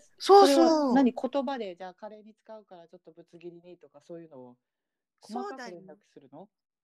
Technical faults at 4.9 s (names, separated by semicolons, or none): none